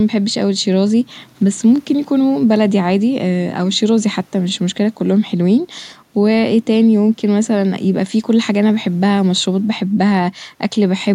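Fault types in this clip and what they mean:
Listening to the speech turned up nothing that stood out as a fault of any kind.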